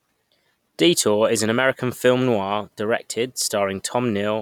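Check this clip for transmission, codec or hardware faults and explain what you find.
No transmission, codec or hardware fault can be heard in this speech recording; the signal stays continuous and stable throughout.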